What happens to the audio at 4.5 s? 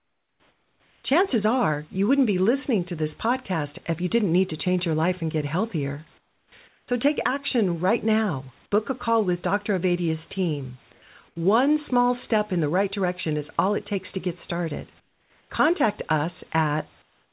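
Nothing goes wrong at 4.5 s: the speech comes through intact, carrying only the narrow telephone-band sound of the call path and faint room noise far beneath it.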